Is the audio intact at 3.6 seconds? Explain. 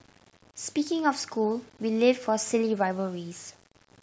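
No. Low bit depth without dither affects 3.6 s just as it does the whole speech clip. The grain follows the signal and sits only about 30 dB below it, which points to something like 8-bit resolution. The likely cause is that each sample was rounded to a coarse step with no dither, so the rounding error tracks the waveform. Quiet passages turn gritty, and the faintest moments sputter or drop out rather than fading smoothly.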